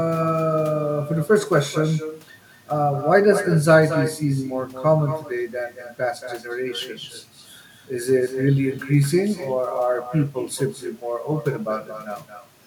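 From start to finish the speech is trailed by an echo with no canceller: the far end is playing the call over a loudspeaker, its microphone is capturing it, and nothing strips it out before it returns. Each phrase comes back roughly a fifth of a second later, about 12 dB quieter and thinner. On a waveform every burst has a smaller twin just behind it; a spectrogram shows faint, delayed copies of each syllable's harmonics.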